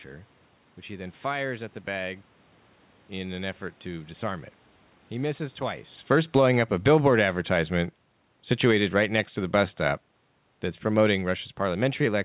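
A speech recording in which the level keeps shifting. Automatic gain falling begins at 5.13 s, just after "effort to disarm it". The control judges the input too loud, or its background noise too strong, and lowers gain gradually until the end, so voice and background sink together. Automatic gain rising interrupts this from 6.48 to 7.69 s. Gain climbs about 3 dB, and speech and room noise swell together. Around 6 s the talker also shifts position at the microphone. The band stops at 4 kHz, which fits a G.711 mu-law call path.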